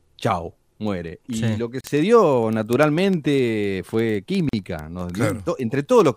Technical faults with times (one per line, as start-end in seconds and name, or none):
0.12-6.16 word clock ticks
1.81-1.84 gap at a join of encoded pieces
4.49-4.53 gap at a join of encoded pieces